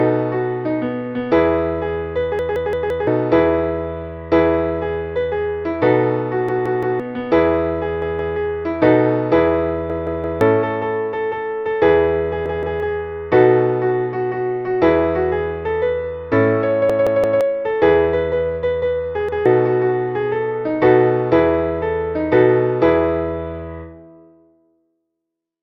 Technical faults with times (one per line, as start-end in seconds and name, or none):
2.39-3.07 repeated buffer
6.49-7.00 repeated buffer
8.02-8.36 repeated buffer
9.90-10.41 repeated buffer
12.46-12.80 repeated buffer
16.90-17.41 repeated buffer
19.29-19.46 repeated buffer